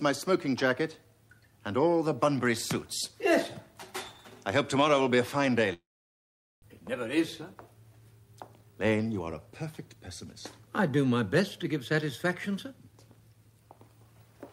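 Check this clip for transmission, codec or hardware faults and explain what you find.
Two transmission faults appear: one long network dropout followed by two stretches of jitter buffer speed-up.

From 5.73 to 6.64 s the sound breaks off. The final sound is stretched into a fading buzz that gives way to quiet, and about 600 ms of material never returns. This is likely a long network dropout, with the receiver concealing the gap before the stream resumes roughly a third of a second later than before.

Jitter buffer speed-up follows at 7.18 to 7.75 s (107% speed, about 50 ms removed) and 8.47 to 9.96 s (115%, about 200 ms removed). The receiver trims pitch-period-sized slices to drain its excess backlog, so the sound runs faster and hurried while pitch stays unchanged.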